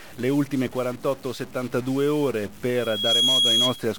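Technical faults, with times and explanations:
Throughout: stuck bit. The audio sounds like one data bit in the converter or digital path is likely frozen at a fixed value, so roughly half the samples land off by that bit's weight, an error somewhere around -40 dBFS. The errors follow the shape of the waveform rather than being random, which produces a harsh, buzzy edge on the sound. Because the bit also flips with the sign of small values, quiet gaps fill with a gritty noise floor instead of falling silent.
2.76 to 3.81 s: loudspeaker feedback squeal. A microphone is hearing the loudspeaker it feeds, and at 3.3 kHz the gain around that loop tops unity, so each pass round the loop makes that frequency louder. It swells over roughly 0.4 seconds into a piercing single-pitched whistle sitting about 5 dB above the rest of the sound. It holds there until it stops at 3.81 s.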